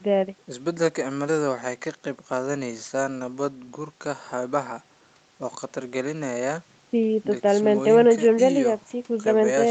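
Nothing in this speech recording stood out as a fault on listening.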